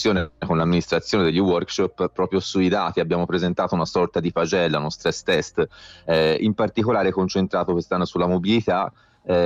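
Nothing faulty can be heard anywhere in this audio.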